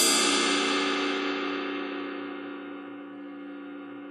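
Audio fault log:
Nothing stood out on listening to these sounds.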